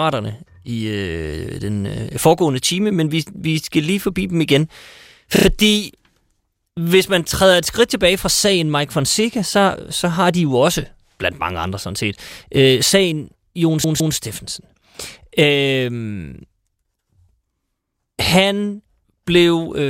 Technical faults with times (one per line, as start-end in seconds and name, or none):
5.36-5.45 repeated frames
13.84-14.16 repeated frames